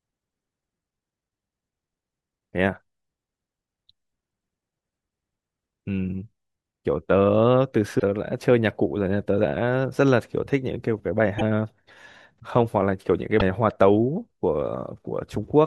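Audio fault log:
7.98–8.02 s, 11.38–11.42 s, 13.39–13.42 s: broken MP3 bit reservoir. The speech jumps ahead three times. A brief chirp, burst of noise or short hole marks each jump, lasting about 28 to 44 ms. The likely cause is dropped frames. The following frame then reads another frame's bytes as its own reservoir data.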